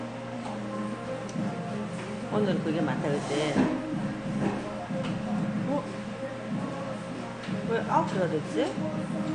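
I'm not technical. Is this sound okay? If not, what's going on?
No, not quite. From start to finish the sound is dull and a bit smeary, with a fizzy, warbly edge, and nothing at all above about 10 kHz. That's AAC compression, likely squeezed down hard to save space, so the top end was dropped.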